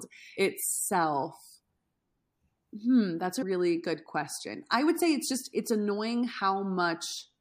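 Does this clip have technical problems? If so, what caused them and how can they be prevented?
Yes. At 3.41 s the speech jumps forward by roughly 150 ms. These are compressed frames skipped: the decoder dropped around seven frames of about 21.3 ms each. Preventing it means checking file integrity after transfer and using error-resilient storage or streaming with retransmission, so no frames arrive missing or damaged.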